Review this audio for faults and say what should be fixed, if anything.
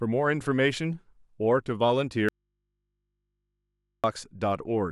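The signal feed was likely interrupted while the downstream input stayed live, causing an audio dropout to a faint residue. The speech cuts out abruptly from 2.29 to 4.04 s, about 1.75 s, leaving only mains hum about 55 dB below the speech. Securing connections and monitoring the source feed during capture would prevent such breaks.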